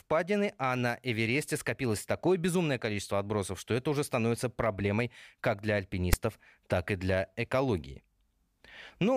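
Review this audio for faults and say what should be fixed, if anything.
At 6.13 s, between "становится проблемой как для" and "так и для экологии", file tags played as audio: text bytes decoded as samples give a brief, lopsided rasp, then zero padding gives silence. A plain dropout would lack the static burst. The fix is for the parser to skip metadata blocks instead of decoding them.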